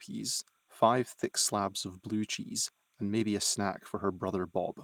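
Linear timecode from a neighbouring track or cable has leaked into the signal for the whole clip, a square wave flipping between roughly 1 kHz and 2 kHz at a rate that fits 30-frame code. This timecode bleed sits faintly behind the speech, around 45 dB down, as a steady chirping warble.

Throughout, there is clock drift between sender and receiver. The sender's clock runs about 2% slow, so the receiver's jitter buffer keeps draining. The speech picks up small, unevenly spaced timing hiccups instead of flowing at an even pace.

At 1.19 to 1.23 s, a short stall from a late packet occurs. The packet missed its slot, the buffer ran empty, and the receiver held the last sound for 20 ms until it arrived. Nothing is lost, but that moment lingers with a slight buzz or dip.

From 1.88 to 4.62 s come repeated timing corrections. To keep pace with the slow sender, the receiver keeps repeating short slices, playing at 97% speed and adding roughly a tenth of a second overall. 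The result is faint stutters and a subtly dragging, unsteady tempo.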